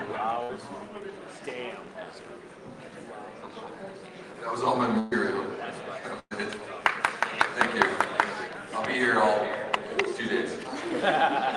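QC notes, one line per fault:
0.43–0.52 s, 4.99–5.14 s, 6.19–6.34 s: burst of packet loss. About 60, 120 and 120 ms are missing; the last sound is held and faded, with the third ending in about 40 ms of silence.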